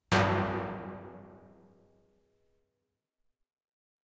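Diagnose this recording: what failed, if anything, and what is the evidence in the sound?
Nothing failed at any stage of the chain: the sounds in this recording arrive intact, with no breaks, distortion, level jumps or timing disturbances anywhere in the signal.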